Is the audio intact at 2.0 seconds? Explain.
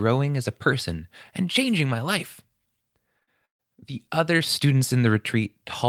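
Yes, at 2.0 seconds the audio plays through intact, with no dropout, click, distortion or other fault at that moment.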